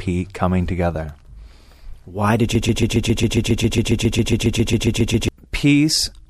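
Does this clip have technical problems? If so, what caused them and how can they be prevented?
Yes. From 2.55 s to 5.29 s the speech turns into a broken-record loop. A fragment of about 136 ms plays over and over, back to back, 20 times. The repeats are identical, so the sound stutters mechanically instead of moving on. Whatever should have been said in those seconds is gone. The likely cause is a stall in the player, encoder or stream that kept resending the last fragment it held. To prevent it, use enough buffering and have the player output silence on an underrun instead of repeating stale data.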